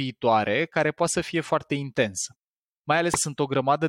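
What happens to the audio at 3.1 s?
Whole frames of the compressed stream were skipped at 3.14 s, either missing from the file or rejected by the decoder as damaged. Playback jumps forward by roughly a tenth of a second, so that stretch of speech never sounds. The remaining audio is stitched together across the gap. With a lossy codec the neighbouring frames overlap and the join is heard as a short, smeared blip; with a lossless one it is a hard click. Either way the speech lurches ahead abruptly.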